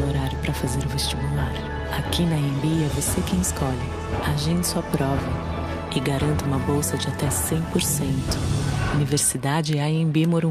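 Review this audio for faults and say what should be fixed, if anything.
No faults found; nothing needs fixing.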